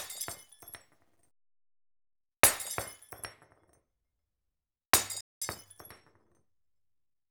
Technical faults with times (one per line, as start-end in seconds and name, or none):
5.21-5.42 playback stall
5.42-7.18 time-compressed catch-up